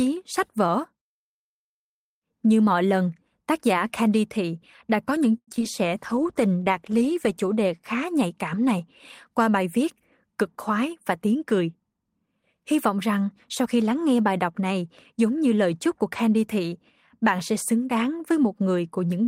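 A speech recording with two network-playback faults. From 5.37 to 5.63 s, just after "thị đã có những", there is repeated packet loss: audio went missing six times in quick succession, and the receiver covered each hole by extending the last stretch of sound. About 148 ms was patched this way and about 50 ms simply dropped out, with the longest gap reaching 100 ms. Since more than half of that quarter-second is concealment, the speech turns choppy, with pieces missing. Later, from 10.49 to 11.69 s, right after "qua bài viết cực", a jitter buffer speed-up occurs. Delayed audio had piled up in the receiver's buffer, so to catch up it cut out many short slices, each a pitch period or a few long, removing roughly a tenth of a second in total. The speech plays at about 107% speed with its pitch unchanged, so that passage sounds rushed.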